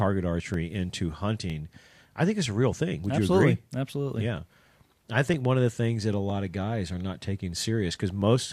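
A speech recording in which two devices' clocks likely run apart, by something on the order of 700 parts per million, so the buffer between them gradually fills or empties until a small block of samples, roughly 30, is dropped or repeated to bring it back in line. These clock drift buffer slips recur steadily every 0.96 s from 0.54 s to 8.22 s, about ten in all, heard as a short click or pop while speech is present.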